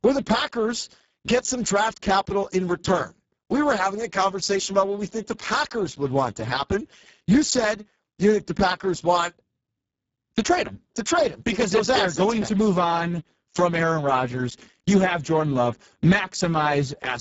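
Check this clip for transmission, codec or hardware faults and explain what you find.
One codec fault runs through the whole clip. Speex codec damage is audible throughout. The speech sounds hoarse and noisy. It points to a very low setting near 6 kbps. Too few bits carry the excitation. Content above 4 kHz is a noise-like fill, and nothing is present above 7.7 kHz.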